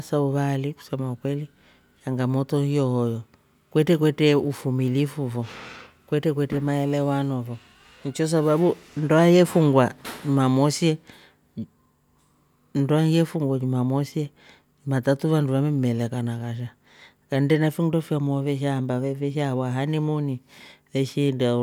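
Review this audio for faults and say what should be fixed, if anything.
A 50 Hz buzz rides under the speech throughout. It is the resampler restarted on every block: each 20 ms block is converted separately, leaving an error at every edge. Carry the resampler's state across blocks, or resample the whole stream in one pass, so that every edge sees its real neighbouring samples.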